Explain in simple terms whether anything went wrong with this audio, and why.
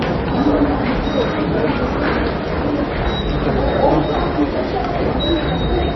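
Two things went wrong, and both last the whole clip.

The first is sample clock jitter. The clock that times each sample wobbles by less than a millionth of a second. So samples land a touch early or late. Fast-changing parts of the sound suffer most. You hear a faint hiss or grit riding on the louder, brighter sounds. It fades away when the sound goes quiet. The error stays far below the sound itself, so it is subtle.

The second is heavy compression damage, likely from MP3 compression at a very low setting. Everything above about 5.9 kHz is simply gone, so the sound is dull and muffled. The encoder also throws away weaker detail. That detail flickers in and out, which gives a watery, swirly quality. Sharp, hissy sounds come out metallic and chirpy. Sudden hits lose their crisp edge and smear.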